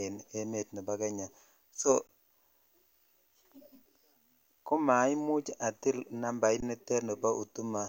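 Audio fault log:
2.07 s and 6.60 s (after "komaimuch atil nambait"): underrun with held sample. The output buffer ran dry for about 19 and 20 ms, and the converter held its last value, so the waveform shows a flat line and the spectrogram a brief blank strip. Playback resumed where it stopped, so each gap ends with only a soft tick.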